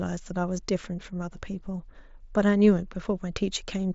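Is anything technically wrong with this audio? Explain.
No, nothing is technically wrong with this audio.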